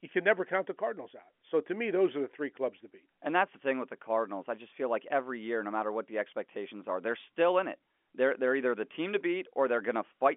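Nothing's technically wrong in this speech clip; it just has the narrow, phone-line sound of G.711 telephone coding, with nothing getting through above about 3.7 kHz.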